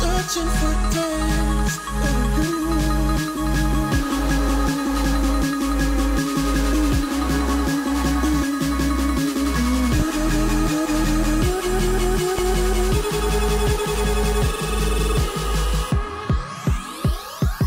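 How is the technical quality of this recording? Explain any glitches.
Two loud pops mar the recording, at 10.00 to 10.03 s and 12.39 to 12.42 s, each a single sharp burst about 10 dB above the sound. Each is likely a brief voltage spike from a plug, switch or static discharge, while the sound continues underneath.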